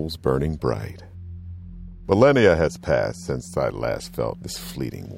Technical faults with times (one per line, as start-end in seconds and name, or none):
none